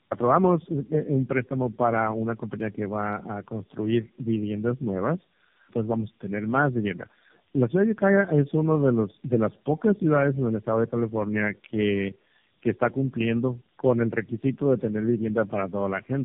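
From start to finish the speech carries tandem speech coding. It sounds rough, muffled and warbly, with nothing above 3.6 kHz. That fits three low-rate speech codecs in a row, something like AMR-NB, then G.729A, then AMR-NB again, each re-encoding the previous one's damage.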